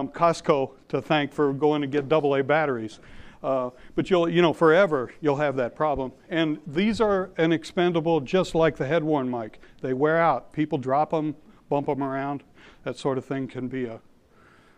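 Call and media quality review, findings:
No audible faults found.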